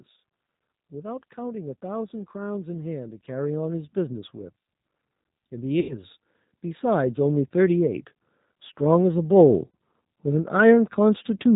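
The speech is carried throughout by the G.729 codec, and its damage is plainly audible. Nothing above 4 kHz survives, and the voice has a rough, slightly synthetic edge from being rebuilt out of a vocal tract filter, a pitch predictor and a few pulses per frame, which fits an 8 kbit/s VoIP link. From 0.88 to 4.64 s there is automatic gain rising: the control judges the input too quiet and lifts its gain by about 8 dB over nearly four seconds, so voice and background swell together. VoIP packet loss concealed by the speech codec appears twice. From 5.80 to 6.03 s about 90 ms of audio is missing, likely from three lost packets, and the decoder stretches the last pitch and filter into a buzzy tone or coloured noise that fades. From 9.68 to 9.71 s a 60 ms loss produces a shorter instance of the same effect.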